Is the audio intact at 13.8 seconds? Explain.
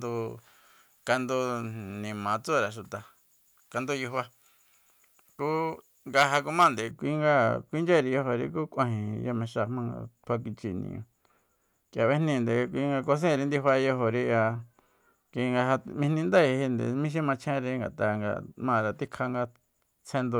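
Yes, the audio is intact at 13.8 seconds, with no dropout, click, distortion or other fault at that moment.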